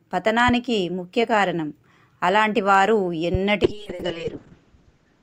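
At 3.34 to 3.37 s a single loud pop rises roughly 10 dB above the sound, likely a voltage step from a plug, switch or static discharge. From 3.66 s to the end, a call bitrate drop coarsens the coding: the sound turns rough and muffled, with the top end cut from 20 kHz to 8 kHz, which fits a fall from 64 to 6 kbps.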